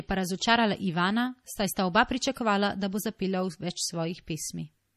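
Speech with a hard treble ceiling at 14.8 kHz and plainly audible watery, swirling artefacts throughout, likely MP3 compression at a bitrate near 40 kbps. Unlike a simple low-pass filter, the frame-to-frame flutter shows the fault.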